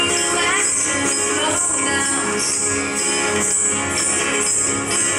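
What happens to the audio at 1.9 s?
Nothing goes wrong at 1.9 s; the audio plays through that moment intact, with no dropout, click, distortion or other fault.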